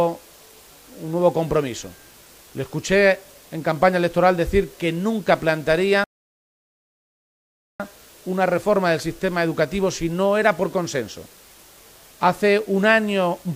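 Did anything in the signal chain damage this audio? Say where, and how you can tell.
Yes. Low bit depth with dither runs through the whole clip. A constant, even hiss sits roughly 30 dB under the sound, with no grit or distortion. That points to sample-format conversion down to 8 bits, where dither turned the rounding error into steady white noise.

A rebuffering stall at the playback stage runs from 6.04 to 7.80 s. The audio cuts to silence, then resumes exactly where it left off with nothing missing. The player ran out of downloaded audio and waited for more, adding 1.76 s.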